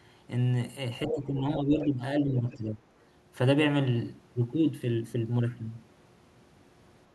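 From 1.07 to 1.15 s a short scrap of the other side's voice leaks through, only a few decibels below the talker. It is most likely loudspeaker echo that the echo canceller failed to remove from the microphone. It sounds like a brief intrusion of a second voice. On a spectrogram it appears as a short burst of extra harmonic lines that do not follow the talker's own pitch track.

Starting at 1.08 s and continuing to 2.02 s, the speech is suppressed in double talk. The talker's level drops by up to around 10 dB over about 0.7 s of that span, and the voice dips. The same happens again from 2.21 to 2.84 s with a deeper drop of around 15 dB. The likely cause is that the canceller could not separate the talker from the echo while both sides spoke, and turned both down. On a waveform the envelope sags in uneven chunks.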